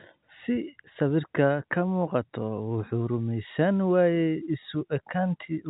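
A speech recording carried over G.711 telephone coding, with its band ending near 3.8 kHz, and nothing is technically wrong with it.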